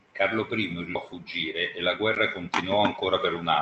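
At 0.95 to 0.97 s the speech skips ahead. Roughly seven tenths of a second of audio is simply gone. It was dropped on the way, or discarded when the jitter buffer overflowed, while later audio was already queued. Nothing fills the hole. The two sides are butted together almost directly. The result is an abrupt jump in the sentence, with the missing syllables never heard.

Right after, from 1.05 to 1.97 s, comes a jitter buffer speed-up. The buffer was holding more audio than it wanted. So the receiver trimmed many tiny slices, each one or a few pitch periods long, about 70 ms in total. The speech runs at about 107 percent speed with unchanged pitch, and sounds hurried. A second speed-up follows from 2.47 to 3.14 s, at about 106 percent, removing roughly 50 ms. Throughout, the Opus call path keeps its usual coding noise and a top end cut near 8 kHz.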